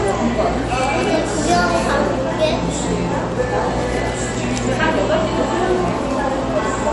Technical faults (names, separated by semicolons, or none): MP3 compression